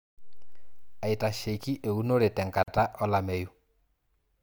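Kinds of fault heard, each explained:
Gap at a join of encoded pieces: the speech suddenly drops out for about 45 ms, from 2.63 to 2.68 s, then resumes exactly where it stopped. This happens when separately encoded chunks, here apparently about 4 s long, are joined without trimming each encoder's start-up delay and end padding. On a waveform it appears as a flat stretch with steep, slightly rounded edges. A spectrogram shows a thin, empty vertical band cutting through every frequency.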